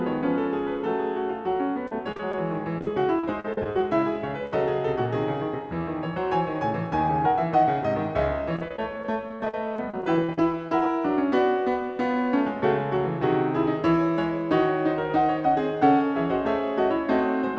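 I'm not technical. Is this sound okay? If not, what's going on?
No. Repeated packet loss (robotic sound) occurs at 1.87 to 2.34 s, 2.78 to 3.81 s and 8.56 to 10.86 s. Small chunks of the music, each no longer than about 50 ms, went missing in transit. The player filled each hole by stretching the sound just before it, so these stretches sound choppy, with pieces missing.

A burst of packet loss occurs at 4.46 to 4.53 s. About 50 ms of music in a row went missing. The player held the last sound and let it fade, then jumped ahead, so that moment is briefly smeared and then skips.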